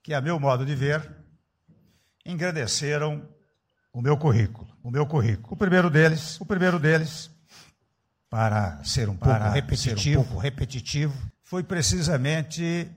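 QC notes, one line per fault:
4.84 to 11.30 s, doubled audio track: a second full-band copy of the sound runs about a second behind the original, at roughly the same loudness. It has no decay and no added room colour, so it sounds like a clean duplicate. It cuts in and out abruptly at both ends. The likely cause is the same signal being captured again through a slower path, or an edit leaving two copies out of step.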